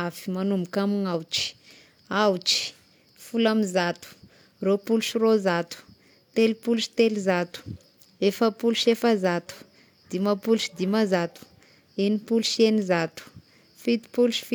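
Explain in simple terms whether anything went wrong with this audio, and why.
Nothing went wrong here; no problems can be heard.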